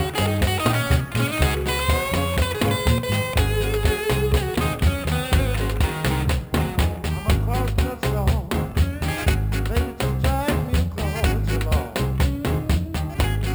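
A bright, metallic fizz runs through the whole clip, rising and falling with the sound's level and sitting about 19 dB below it. This is imaging from sample-and-hold upsampling, which fits repeating each sample of 12 kHz audio without smoothing, so a mirrored spectrum appears between 6 and 12 kHz.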